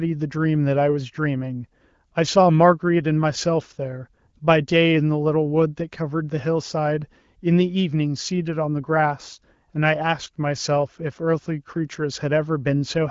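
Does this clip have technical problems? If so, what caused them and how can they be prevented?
No, no technical faults.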